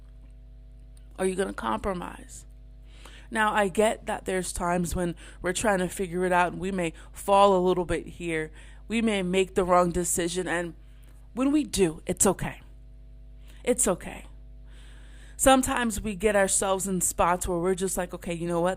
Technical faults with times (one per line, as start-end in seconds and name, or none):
0.00-18.77 mains hum